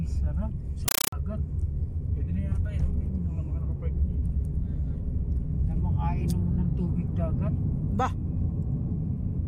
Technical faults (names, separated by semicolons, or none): compressed stream played as audio